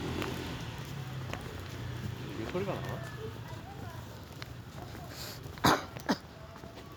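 No technical faults are audible.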